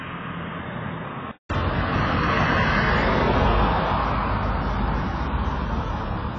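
A recording of everyday sounds with two faults. For the first 1.5 s, the band stops at 3.8 kHz, the level sits roughly 10 dB lower, and a faint noise floor of its own lies well under the signal. A silence of about 0.19 s follows before the fuller sound returns. That pattern is most likely an input switched to a poorer device, with the recording starting on a narrowband microphone or headset call profile and moving to the main input at 1.5 s.

Throughout the clip, nothing is present above 7.5 kHz. Heavy smearing and a warbling, fizzy texture run over sustained sound, and the upper bands have gaps or noisy infill. This is likely AAC compression: AAC-LC quantising coarsely against its hearing model, lowering its cut-off and thinning the spectrum in a way that fits a very low bitrate of around 16 kbps.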